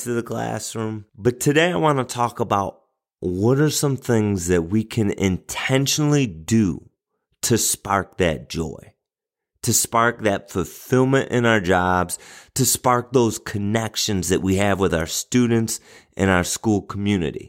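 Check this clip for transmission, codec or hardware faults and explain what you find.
No faults found anywhere in this speech recording.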